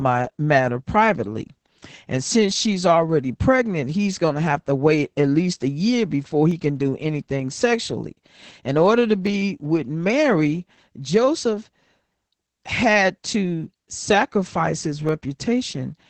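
Heavy Opus voice compression, running in its SILK linear-prediction mode with a wideband setting and 20 ms frames, shapes the whole of this speech clip, and the sound fits a bitrate of about 10 kbps. At that rate the coder keeps only the lower band, up to roughly 8 kHz, and quantises the excitation coarsely, so the voice comes out muffled, hoarse and faintly robotic from start to finish. On top of that come single sharp clicks, each a thin vertical line across the spectrum, at 4.13 s, between "since she's already pregnant" and "going to have to", at 6.51 s, at 7.60 s just after "he can do anything", at 9.27 s right after "order to", and at 15.09 s. The likely cause is dropped samples: a fraction of a millisecond goes missing from the stream each time, so the waveform jumps abruptly to a later value without any sound being audibly lost.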